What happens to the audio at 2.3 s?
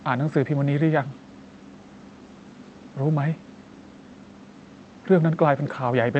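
Nothing goes wrong at 2.3 s: the speech there carries only the steady coding texture of the Opus call path and has no dropout, click or other fault.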